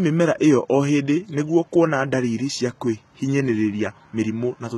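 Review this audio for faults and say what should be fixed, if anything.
HE-AAC compression damage runs through the whole speech clip. The treble sounds synthetic. Sibilants come out gritty and metallic, with a lispy edge. Nothing is present above about 11.8 kHz. The damage is heavy, which points to a very low bitrate, around 16 kbps. The likely cause is spectral band replication, which codes only the lower spectrum and rebuilds the top by copying lower bands upward. Those copied harmonics don't line up with the real ones. To prevent it, encode at a higher bitrate with plain AAC or a lossless format.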